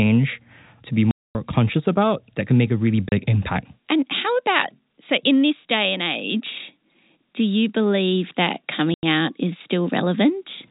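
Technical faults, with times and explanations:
1.11–1.35 s, 3.09–3.12 s and 8.94–9.03 s, packet loss filled with silence: the audio drops to dead silence after "to be" (240 ms), after "can make a really" (30 ms) and after "do you believe that" (90 ms). Every gap is a multiple of 30 ms, which fits 30 ms packets going missing. Unlike concealed loss, nothing smooths or repeats the sound across the holes. The 4 kHz telephone bandwidth carries on unchanged around them.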